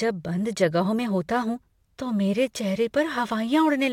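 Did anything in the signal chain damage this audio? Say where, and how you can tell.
Yes. From 0.99 s to the end, the speech carries a gritty, inharmonic fizz. It tracks loud and bright syllables. This is crude rate conversion at the sample-rate stage, likely dropping samples without filtering, which fits a 48 kHz to 44.1 kHz step. The error sits roughly 30 dB below the speech.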